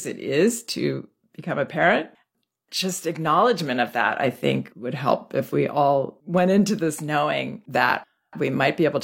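For the first 6.0 s, an adaptive stream starting at a low bitrate: the player began on a thin, heavily compressed version, which fits HE-AAC near 32 kbit/s, so speech has synthetic-sounding treble and smeared artefacts. Just before "went into this knowing" it steps up without a gap, and the speech turns clear, extending to 16.3 kHz.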